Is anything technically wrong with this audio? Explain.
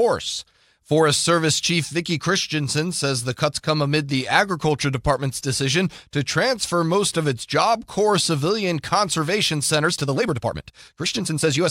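Yes. The speech has a time-stretched section from 9.79 s to the end at 11.70 s, right after "civilian conservation". From that point the pace jumps to about 1.55 times normal speed, while the pitch stays where it was. The likely cause is software squeezing the audio to fit a shorter length. It keeps the pitch by cutting out short slices and joining what remains. The result sounds rushed.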